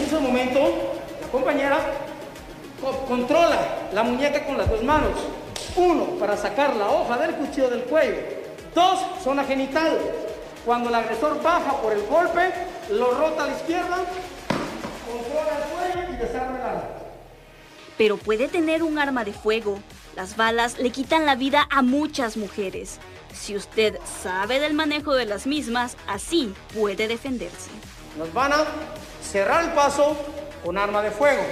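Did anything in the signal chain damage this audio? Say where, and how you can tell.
No, nothing in the signal chain damaged this audio.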